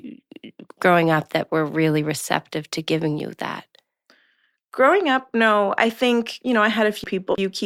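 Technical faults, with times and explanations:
7.04 to 7.65 s, frames out of order: right after "I think you know", the last stretch of speech goes garbled and fluttery, like it's tripping over itself. Two neighbouring runs of frames got swapped and decoded in that wrong order, so the halves of the passage play back to front. Nothing's actually missing, just reshuffled.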